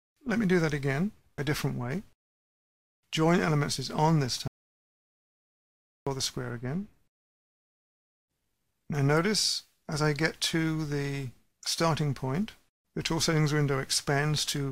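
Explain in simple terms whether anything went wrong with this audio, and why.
Something did go wrong. At 4.48 seconds the sound cuts off abruptly and leaves dead silence, not even the faint background hiss of the room, until it snaps back at 6.07 seconds. That is an audio dropout to silence, lasting about 1.6 seconds. The likely cause is that the input was briefly lost, perhaps through a loose connection, a failed link or an accidental mute, while the recorder kept writing pure silence. Whatever happened during that gap is gone.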